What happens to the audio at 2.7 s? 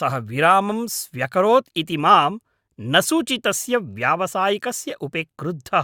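Nothing goes wrong at 2.7 s; the speech there is intact, with no dropout, click or distortion.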